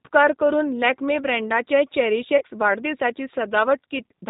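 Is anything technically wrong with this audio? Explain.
Yes. The speech is carried by the G.729 codec throughout. Its narrowband reconstruction from a vocal tract filter and sparse pulses, consistent with an 8 kbit/s stream, cuts everything above 4 kHz and leaves a plainly rough, synthetic texture.

From 2.38 to 2.43 s there is VoIP packet loss concealed by the speech codec. About 30 ms of audio, consistent with a single lost packet, was extrapolated from the preceding pitch and filter, so the sound smears into a fading buzzy tone or coloured noise.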